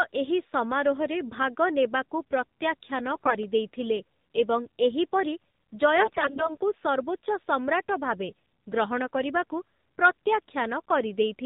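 Speech, carried through the AMR narrowband mobile codec for the whole clip. Nothing above 4 kHz survives, so the sound is muffled and thin. Codec damage is plainly audible as a buzzy, synthetic tone, which points to a low mode around 7.4 kbps. AMR bit errors strike twice, from 3.14 to 3.35 s and from 5.96 to 6.56 s. Roughly 15% of the weakly protected bits are flipped. The pitch and level hold, but the excitation pulses land wrongly, so these stretches turn hoarse, scratchy and gargly.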